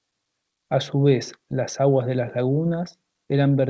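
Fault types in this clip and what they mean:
No technical fault can be heard in this speech. It has come over a call path with nothing above 8 kHz, which fits a wideband codec such as G.722 at 64 kbps.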